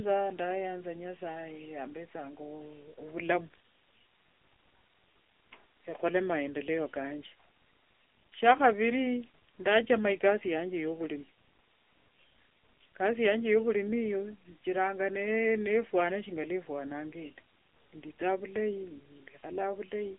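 AMR narrowband mobile codec damage runs throughout the speech. Nothing passes above 3.6 kHz, and the band sits at roughly 300 Hz to 3.5 kHz. The model-based coding is plainly audible as a buzzy, synthetic edge, which points to a mode near 8 kbps.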